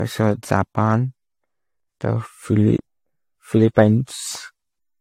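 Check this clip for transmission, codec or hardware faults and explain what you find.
One codec fault runs through the whole speech clip. From start to end the sound is swirly, smeared and hollow, attacks are blurred, and nothing remains above 16.6 kHz. This is likely generation loss: decoding and re-encoding around five times, each pass quantising on a shifted frame grid so noise accumulates. The character fits repeated AAC-LC encoding at a modest bitrate.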